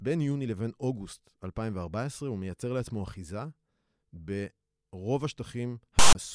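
A speech recording that ends with file tags played as audio, running from 5.99 s to 6.15 s. For about 0.16 s a block of metadata is decoded as though it were sample data. The text portion comes out as a harsh, loud rasp sitting off-centre to one side, because character bytes form a lopsided waveform. It then drops abruptly to silence where the tag block's zero padding is read. Both edges are hard, with no fade.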